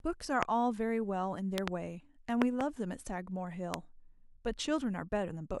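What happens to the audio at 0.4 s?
A single loud pop from 0.43 to 0.45 s, likely a voltage pulse from a switch or static, sits about 25 dB above the speech, a tall waveform spike and a full-height spectrogram stripe.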